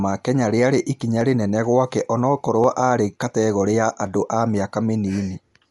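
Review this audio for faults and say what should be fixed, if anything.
The speech is band-limited with nothing above 11.4 kHz, so it sounds dull, and a rough, fluttering noise clings to the voiced parts. That fits likely Dolby Digital compression at a low bitrate, around 64 kbps. The encoder cut the top of the band and gave many frequency lines no mantissa bits, and the decoder filled those lines with dither noise. Prevent it by encoding at a higher bitrate or keeping a lossless master.

From 1.21 s to 5.50 s a click recurs at a steady 1.43 s interval, roughly four in all. This is clock drift buffer slips, likely from two devices whose clocks differ by a couple of hundred ppm. The buffer between them drifts until about 15 samples are dropped or repeated, and each slip produces the click. Prevent it by locking both devices to one clock or by adding asynchronous sample-rate conversion.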